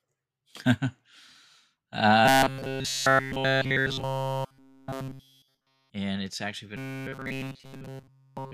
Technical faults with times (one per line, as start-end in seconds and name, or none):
2.26-5.90 robotic sound from repeated short buffers
6.77-8.53 robotic sound from repeated short buffers